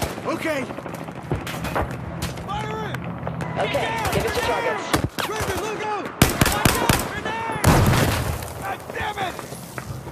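At 2.95 s there's a sharp snap, likely an electrical switching spike, a nearby switch or discharge arcing briefly into the line. Then at 5.81–5.84 s and again at 9.71–9.74 s, the sound jumps ahead with a brief 30 ms garble. That's likely a broken MP3 bit reservoir: frames went missing, so the next frame borrowed the wrong bytes, fitting the roughly 26 ms frame size.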